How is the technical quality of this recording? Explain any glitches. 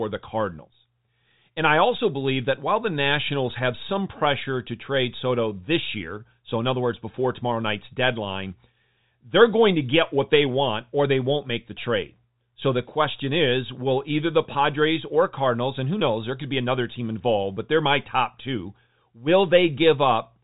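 No glitches are audible; the speech comes over a G.711 telephone path, so its band stops at 3.8 kHz.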